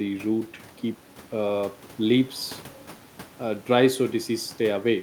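Speech, with no technical fault audible anywhere in the recording. There is nothing to place at any time and no cause to trace.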